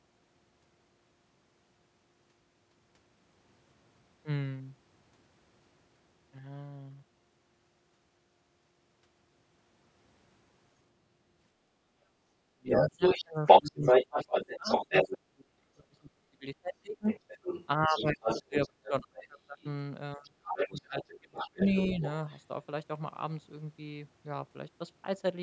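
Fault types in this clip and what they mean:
speech suppressed in double talk: From 12.4 to 22.0 s the talker dips by up to about 35 dB whenever a second voice overlaps, likely echo-canceller ducking rather than network dropouts.
other side's voice leaking through: A different voice surfaces between 12.7 and 22.4 s, at times about 10 dB above the talker, likely uncancelled loudspeaker echo rather than room reverberation.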